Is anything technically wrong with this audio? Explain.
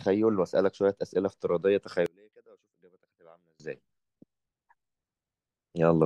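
Yes. From 2.06 to 3.60 s the speech drops by about 31 dB to a faint remnant, most likely from one channel inverted: the reversed-polarity channel cancels the shared centre signal in the mono sum. The waveform collapses to a sliver, and the spectrogram darkens.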